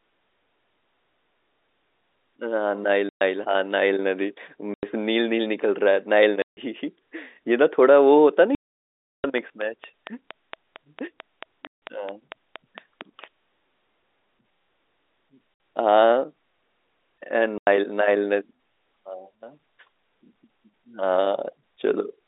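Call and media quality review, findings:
Packet loss filled with silence, at 3.09 s (120 ms), 4.74 s (90 ms), 6.42 s (150 ms), 8.55 to 9.24 s (690 ms), 11.67 s, 15.54 s (60 ms) and 17.58 s (90 ms). Hard-edged dropouts. Receive path / jitter buffer: lost packets replaced by silence rather than concealed. Gap lengths all multiples of 30 ms, which fits 30 ms packets. 8.55 s gap the longest, a clear hole in the speech.

Train of clicks, 9.38 to 13.25 s. Regular ticking at about 4.4 per second, around twenty clicks, peaks about 10 dB above the speech, audible in pauses too. Likely interference coupling into the analogue path or a faulty connection or power supply. Overlaps the 11.67 s dropout. Separate from the telephone band limiting of the G.711 line, which sounds as expected.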